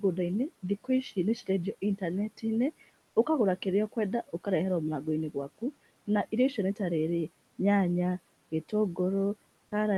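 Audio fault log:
9.67–9.71 s, sound dropped by the voice detector: about 20 ms of speech gives way to steady comfort noise, likely because the sender's Opus DTX treated that quiet tail as background.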